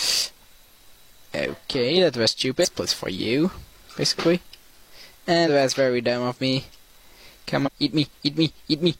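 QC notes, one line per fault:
2.60–2.66 s, 5.44–5.49 s, 7.62–7.70 s: damaged data in a compressed stream. Three brief bursts of 50 to 76 ms break into the sound as chirps or blips. Corrupted bytes make the decoder misread frames and lose sync until it finds the next valid frame header.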